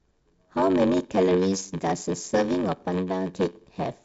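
Block size mismatch (padded) runs throughout the speech. Zero-filled gaps in each block, consistent with a 512-sample buffer, produce a 93.8 Hz buzz and slow the audio to 0.861 times normal speed at roughly unchanged pitch.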